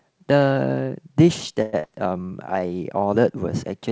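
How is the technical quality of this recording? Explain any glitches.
The recording has two audible glitches, both from network delivery over a call path that carries nothing above 8 kHz, consistent with G.722.

From 1.62 to 1.86 s the speech smears into a fading buzzy continuation of the last sound rather than silence, and about 100 ms of speech is simply gone when it resumes. This is likely a long network dropout: the receiver concealed roughly 216 ms and absorbed a delay shift of around 50 ms.

From 2.26 to 2.67 s the speech drags at the same pitch, running at about 89% speed with drawn-out sounds. This is a jitter buffer slow-down: the receiver repeated pitch periods to add 54 ms of reserve.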